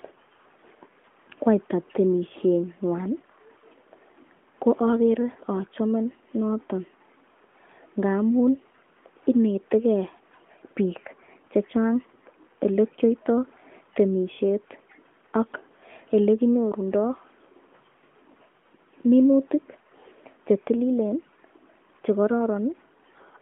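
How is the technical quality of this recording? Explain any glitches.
No glitches turn up anywhere in this recording, so there's nothing here that needs explaining.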